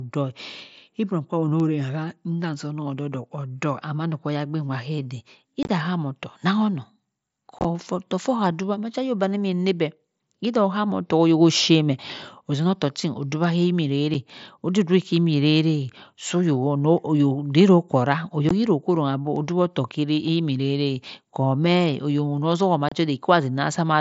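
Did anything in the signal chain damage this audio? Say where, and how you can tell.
Yes, unconcealed Bluetooth headset packet loss on the wireless link between headset and phone damages this speech. Short holes with hard, abrupt edges open at 5.63 to 5.69 s, 7.59 to 7.65 s, 14.14 s, 18.49 s and 22.89 to 22.92 s. The first two sound chopped, with several gaps scattered over about 60 ms. Each gap comes in steps of 7.5 ms, which fits whole mSBC voice packets going missing. Nothing fills them in, so the speech drops straight out and back.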